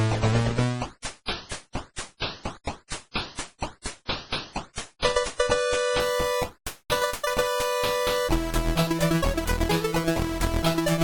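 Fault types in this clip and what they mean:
Adaptive stream starting at a low bitrate: the player opened on a low-quality rendition for a quick start, then stepped up once it had measured the connection. Until 6.0 s nothing sits above 10.5 kHz and artefacts are stronger, fitting 32 kbit/s MP3. Quality then jumps, without a gap, to what sounds like 128 kbit/s.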